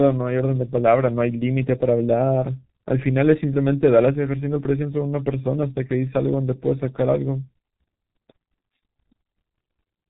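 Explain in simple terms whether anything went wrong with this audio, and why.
The speech was squeezed through the G.723.1 codec, an old internet-phone format, from start to finish. It cuts everything above 3.8 kHz and heavily degrades the rest, so it sounds muffled and hoarse with smeared consonants. A simple treble cut would be muffled but still clean.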